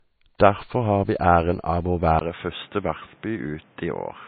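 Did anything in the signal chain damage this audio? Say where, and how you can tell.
Yes, at the codec stage. Throughout the speech nothing appears above 4.5 kHz, with smeared, watery detail, yet the file is large. This is low-bitrate audio saved at a high bitrate, likely a very low-rate MP3 re-encoded at a high rate. The hard ceiling, not a gradual roll-off, separates it from a dull microphone.

At capture, from 2.19 s to the end, a 20 ms silence is followed by a narrower band topping out at 3.8 kHz, a level drop of around 5 dB, and new background noise roughly 30 dB down. This fits an input switched to a poorer device. Unlike a codec change, it brings a different noise floor.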